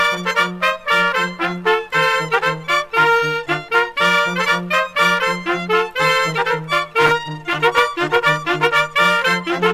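Nothing in this clip stands out as a technical fault; it just sounds the way it should.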